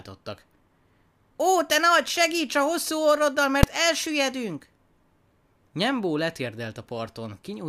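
Invalid numbers at full scale occur at 3.63 s in this speech. A calculation produced infinite or invalid values, which became the largest positive or negative value for about 2.7 ms, a span that fits a 128-sample block. Being so short, it is heard as a single loud bang.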